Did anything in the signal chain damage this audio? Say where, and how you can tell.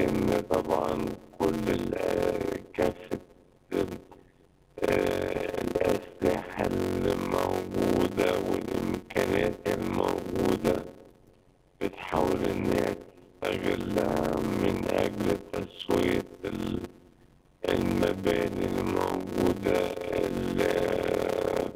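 Yes. A block size mismatch (padded) at the driver or buffer stage runs throughout. There is a steady buzz near 92 Hz, and the audio plays at 0.533 times normal speed at normal pitch, which fits 256-sample blocks zero-padded into larger reads. The waveform shows regular flat gaps, and the spectrogram shows evenly spaced vertical stripes.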